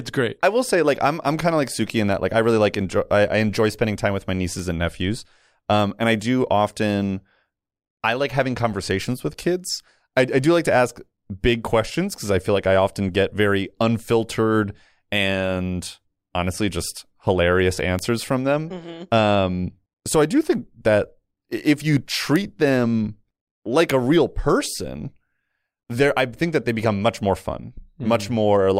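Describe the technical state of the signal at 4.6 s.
At 4.60 s, after "spending time with my", a bit error spike: a flipped bit jolts two samples to about -16 dBFS, giving one broadband tick unrelated to the speech, not a gap or dropout.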